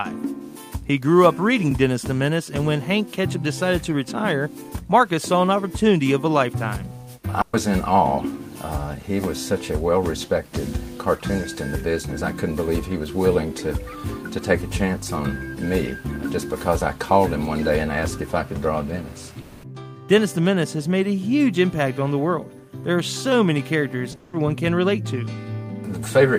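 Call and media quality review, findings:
Burst of packet loss, 7.41–7.55 s: last sound held and faded over 120 ms, never reaching silence, then audio resumes with that stretch gone. The jitter buffer/decoder concealed several consecutive lost packets. Longer than a tick, shorter than a dropout.

Long network dropout, 19.41–19.65 s and 24.15–24.35 s: extended held-and-fading fill, 220 ms and 180 ms, audio resumes further on with the gap's content missing. Likely a transport interruption. Longer fill than the 7.41 s burst, still no true silence.

Short concealed packet loss, 24.11–24.15 s: brief smear of about 20 ms, pitch or noise extrapolated then blended back. Decoder concealment of audio that arrived too late, running straight into the 24.15 s dropout. Too short to hear as a held buzz.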